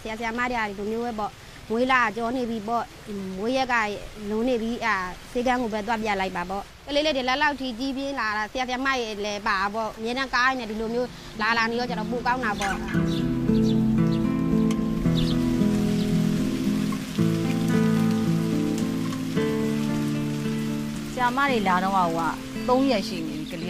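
Nothing stood out as a technical fault anywhere in the recording on listening.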